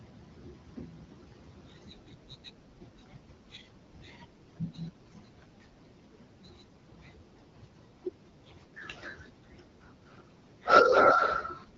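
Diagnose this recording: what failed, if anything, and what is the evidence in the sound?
Nothing here has failed: the speech comes across as you'd expect from an HD Voice call carried on the AMR wideband codec at 12.65 kbit/s, which leaves only a light coding character on the sound, and none of the stages in the chain shows a problem.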